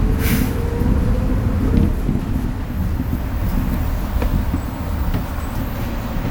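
From 2.19 to 2.45 s, frames out of order: two adjacent blocks of about 128 ms each, consistent with four frames apiece, were swapped. The stretch flutters, but unlike dropped frames, nothing is missing and the timing afterward stays intact.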